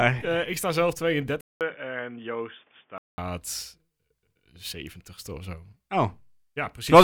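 Just after "ik sta zelf", at 1.41 s, the recording input was likely switched to a poorer device until 3.18 s. A 200 ms silence marks the switch, then the speech turns dull with nothing above 3.6 kHz, drops by roughly 5 dB, and carries a new background noise well below it.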